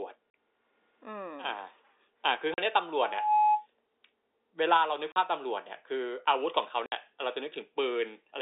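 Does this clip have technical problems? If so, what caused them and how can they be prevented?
Yes. Packet loss filled with silence: the network dropped audio packets and the receiver played nothing in their place, cutting hard-edged holes into the speech at 0.30–0.34, 2.54–2.58 and 5.12–5.16 s (40 ms each) and 6.86–6.92 s (60 ms). These lengths fit 20 ms packets. A jitter buffer with packet loss concealment, or forward error correction, would hide such gaps.

Loudspeaker feedback squeal: the microphone picked up its own loudspeaker, and the loop gain exceeded one at 844 Hz. From 2.96 to 3.67 s that tone swells over less than half a second into a squeal a few decibels louder than the speech, running through the narrow telephone band of the G.711 line. Headphones, lower gain or acoustic echo cancellation would prevent it.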